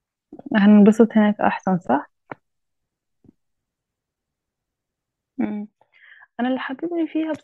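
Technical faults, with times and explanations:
5.45 s to the end, sudden gain jump: right at 5.45 s the whole level drops by about 12 dB in one step and stays down for the rest of the clip. The speech and the background noise fall together, so it's the digital gain itself that changed, not someone moving away from the mic. There's no fade at all; the likely cause is a gain setting or bit shift applied instantly, without a ramp.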